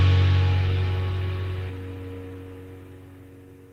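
At about 1.69 to 1.71 s there's a skip ahead. Roughly 0.4 s of audio got dropped while later audio was already queued, so playback jumps straight across with no fill, and the two sides butt together almost seamlessly.

Right after, from 1.79 to 2.44 s, you get a jitter buffer speed-up. The buffer was holding more than it wanted, so the receiver trimmed out short pitch-period-sized pieces in a row, something like 70 ms in total. The audio runs at about 108% speed with the pitch unchanged and sounds a bit rushed.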